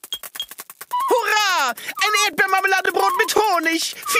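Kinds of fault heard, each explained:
Overlapping chunks: at 0.25–0.27, 0.77–0.79, 1.29–1.31, 1.81–1.83, 2.33–2.36, 2.86–2.88, 3.38–3.40 and 3.90–3.92 s, a stutter recurs about every half second. The audio was handled in 0.5 s blocks, each starting about 21 ms before the previous one finished, so that sliver plays twice at every join.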